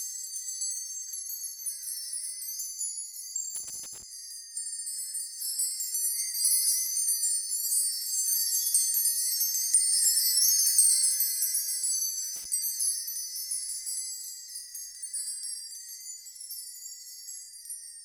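From 3.56 to 4.03 s there is loose connector crackle: a worn or dirty contact making and breaking as it shifts, so the signal is chopped on and off. It sounds like irregular scratching. On a waveform it shows as ragged dropouts and spikes, and on a spectrogram as scattered broadband vertical streaks. A shorter burst recurs from 12.36 to 12.45 s.

Repeated frames come in at 4.66 s. A 64 ms block, which fits two compressed frames, plays three extra times through 4.85 s and adds 192 ms. It is heard as a rapid stutter. The waveform shows identical copies of the same segment in a row, and the spectrogram shows a repeating pattern. At 16.43 s a single 32 ms block repeats once, adding 32 ms and giving a brief hiccup.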